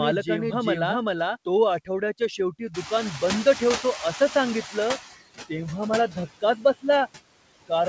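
Noise suppressor artifacts run through this whole speech clip: the suppressor pulls steady background down by about 17 dB frame by frame, so the noise sinks in pauses and swells under the talking. A doubled audio track is already under way at the start and stops abruptly at 1.36 s. A second full-band copy, about as loud as the original, trails it by roughly 0.4 s with no room colour, likely from the audio being captured again along a slower path. Speech cut by the noise suppressor appears from 2.38 to 2.91 s, where the suppressor mistakes parts of the talking for noise and turns roughly 150 ms of it down by up to about 10 dB, so those parts sound swallowed or faint. It recurs from 6.41 to 6.85 s, just after "तेव्हा मला", where about 200 ms drops by up to about 16 dB. The noise suppressor catching up runs from 2.74 to 5.09 s. The room noise jumps by about 23 dB near 2.5 s, and the suppressor's estimate lags, so the louder background leaks through before being cut by about 12 dB over roughly 2.35 s, settling before "तेव्हा मला". 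Nothing reaches above 8 kHz, consistent with the wideband call codec on this path.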